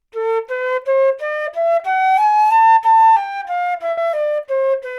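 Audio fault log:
3.91–3.99 s, burst of packet loss: several consecutive packets never arrived in time, so the receiver stretched the last sound it had for about 60 ms, fading it down, then jumped ahead, leaving about 60 ms of the original audio missing.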